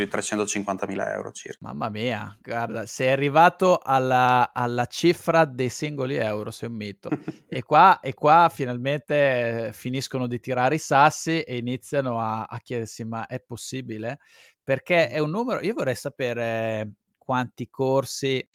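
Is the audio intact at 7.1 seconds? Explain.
No. A skip ahead occurs at 7.09 to 7.11 s, right after "singoli euro sei un". Roughly a second of audio was thrown away while later material was already queued, whether lost in transit or discarded when the jitter buffer overflowed, so playback lurches forward by about that much. Nothing fills the gap: the speech on either side is butted together almost directly, and the listener hears an abrupt jump with the intervening stretch simply missing.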